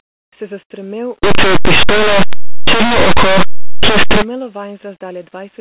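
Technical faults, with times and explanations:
1.23–4.22 s, linear audio read as companded: for these three seconds the plain 8-bit linear samples are being decoded as if they were mu-law codes. Mu-law packs its loudest values right next to the codes that linear audio uses for near-silence, so samples sitting just on one side of zero jump to almost full scale while those on the other side stay tiny. That lopsided mapping is why it blasts out as harsh, clipped-sounding distortion.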